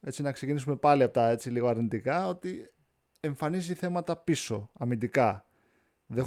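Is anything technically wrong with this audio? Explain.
No, nothing stood out as technically wrong on listening to this speech clip.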